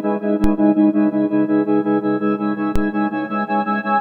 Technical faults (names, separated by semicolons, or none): DC step